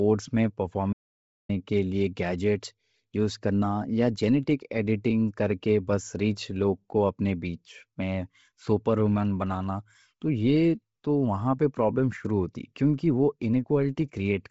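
From the start the speech sounds breathy and grainy, with nothing above 7.7 kHz. This is likely Bluetooth LC3 compression: heavy damage that fits a low bitrate around 24 kbps and 7.5 ms frames, where the upper spectrum is zeroed and patched with noise.

From 0.93 to 1.49 s the sound cuts to complete silence, with no room tone, for about 560 ms, then resumes mid-flow. This audio dropout to silence likely comes from a lost input while the recorder kept writing zeros, so that stretch is simply gone.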